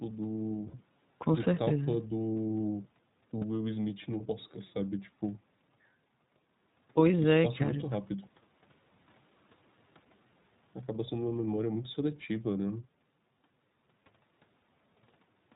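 The whole clip carries iLBC codec coloring. Nothing above 4 kHz survives. The speech sounds slightly rough and synthetic. The damage is plainly audible. The sound fits iLBC at 15.2 kbps in 20 ms frames, each coded independently.

From 0.68 to 0.76 s come lost iLBC frames. The decoder repeats the last pitch cycle with added noise. It sounds like a brief buzzy, held vowel. The gap fits three missing frames. At 3.38 to 3.43 s a shorter gap fits two. The voice returns almost immediately each time.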